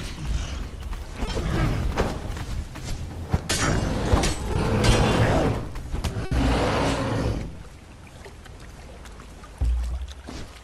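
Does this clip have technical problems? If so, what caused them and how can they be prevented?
Yes. There are two short concealed packet losses, at 1.25 to 1.29 s and at 4.53 to 4.57 s. Each time, about 20 ms of audio arrived too late for the decoder, and the receiver filled the gap by extending the preceding sound before blending back into the real signal. Each one is heard as a brief smear or wobble. On a spectrogram, the frequency content runs on unchanged for a moment instead of evolving. A slightly deeper adaptive jitter buffer, combined with in-band forward error correction, would prevent these.

There is also a burst of packet loss from 6.25 to 6.33 s, where roughly 60 ms went missing in one run. The receiver continued the last sound and turned it down as the gap went on, producing a held buzz or fading hiss. Playback then resumes further along, so that 60 ms of content is simply gone. 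A spectrogram shows a frozen, steadily dimming band followed by an abrupt jump in content. On the waveform, the envelope tapers and then restarts at a new shape. Sending redundant audio and prioritising the traffic on the network would guard against bursts like this.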